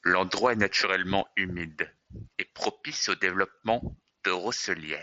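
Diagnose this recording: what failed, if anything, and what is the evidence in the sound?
Nothing failed in this recording; the speech comes through a Bluetooth mSBC headset link, which is working as it should, with nothing above about 7.7 kHz.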